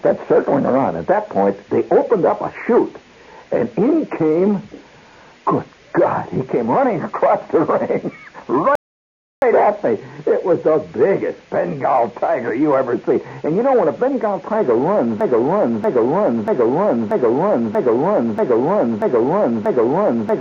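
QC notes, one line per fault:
8.75–9.42 s, rebuffering stall: sound cuts to silence for about 0.67 s, then resumes exactly where it stopped. The waveform shows a flat gap and the spectrogram a blank column.
15.21 s to end, broken-record loop: a 0.64 s piece repeats back to back eight times, likely a stalled stream resending its last fragment. The spectrogram shows identical tiled blocks.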